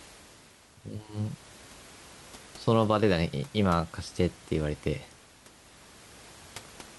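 No technical faults can be heard anywhere in this speech recording. A room noise sits about 23 dB below the speech, captured along with it at the microphone.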